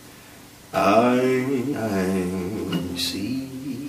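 There's a burst of damaged data in the compressed stream at about 1.72 s: corrupted bytes throw the decoder out of sync, leaving a brief glitch while it hunts for the next frame.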